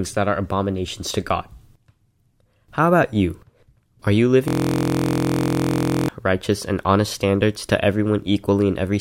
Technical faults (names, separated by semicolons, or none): system hang loop